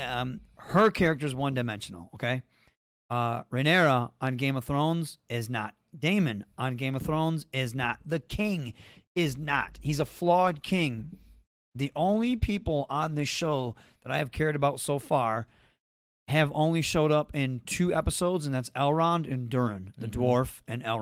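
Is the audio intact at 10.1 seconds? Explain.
No. At 10.1 s the speech sounds rough, watery and muffled, part of a call bitrate drop running from about 8.12 s, just after "is not", to 14.07 s, where "I have cared about" begins. The call's bandwidth estimate fell, so the encoder was told to spend far fewer bits. It quantised the sound more coarsely and trimmed the upper frequencies, which fits a drop from 32 to 14 kbps held for roughly 5.9 s.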